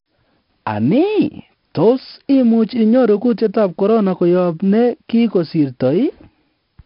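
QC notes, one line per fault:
Throughout, 4-bit ADPCM compression: each speech sample is coded as a coarse step from a prediction, so gritty hiss rides on every loud syllable and sharp attacks distort. Nothing sounds above 5.3 kHz, which points to a sample rate near 11 kHz. The damage is heavy.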